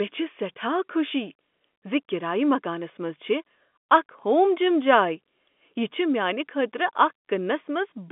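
No technical faults can be heard in this speech clip, which carries the narrow band of a G.711 telephone line.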